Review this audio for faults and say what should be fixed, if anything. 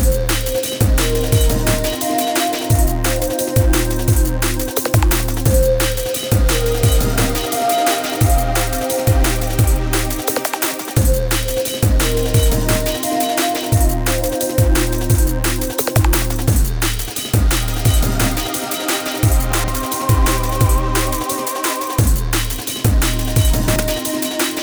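A brief jumbled stutter at 19.52–19.68 s and 23.68–23.8 s. These are chunks out of order, where a 40 ms block plays three, then two, blocks late. To prevent it, reorder incoming chunks by sequence number in a jitter buffer before writing them to output.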